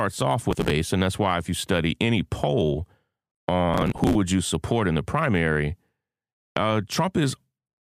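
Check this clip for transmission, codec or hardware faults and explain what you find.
The speech carries two bursts of processor overload crackle, from 0.51 to 0.71 s and from 3.74 to 4.15 s. The processor repeatedly misses its deadlines for short buffers of around 5 ms, and dozens of them are skipped outright, each leaving a tiny hard-edged gap. The result is a gritty tearing over the speech. On a waveform it looks like a stretch chopped by many brief dropouts. On a spectrogram it shows as dense vertical broadband streaks across the whole band.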